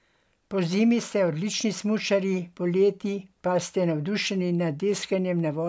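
No technical faults can be heard anywhere in the clip.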